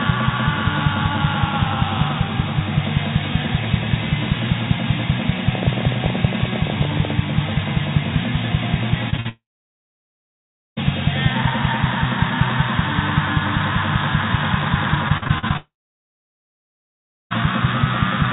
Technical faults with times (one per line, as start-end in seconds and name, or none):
5.55-7.11 train of clicks
9.10-9.20 short concealed packet loss
9.20-9.27 burst of packet loss
9.29-10.78 long network dropout
15.08-15.57 repeated packet loss (robotic sound)
15.57-17.32 long network dropout